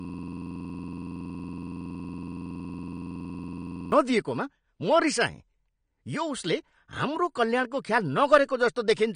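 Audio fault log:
0.00–3.92 s: system hang loop, already running when the clip opens. One 46.44 ms slice, which fits a 2048-sample buffer, repeats exactly at 21.5 Hz, giving a rapid stutter rather than random dropouts.
throughout: AAC compression, likely cause. The sound is dull and smeared, with nothing above 9.7 kHz and a fizzy, warbling texture, which fits low-bitrate AAC-LC near 32 kbps. A plain low-pass filter would remove the highs but leave no such texture.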